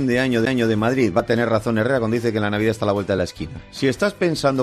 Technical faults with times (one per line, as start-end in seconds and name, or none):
0.45 CD skip
1.20 overlap between stream segments